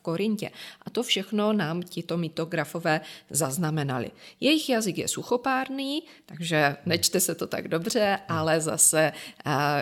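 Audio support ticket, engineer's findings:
Listened over the full speech recording and found nothing to flag, so there's no fault to log on this one.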